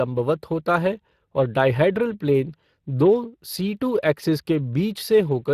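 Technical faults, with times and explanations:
Throughout: Speex codec. The speech carries a plainly audible hoarse, grainy roughness, which fits a rate near 22 kbps. CELP coding gives the excitation too few bits to copy the voice's fine detail. Unlike MP3's swirling, the damage is noisy and voice-shaped, with nothing above 15.3 kHz.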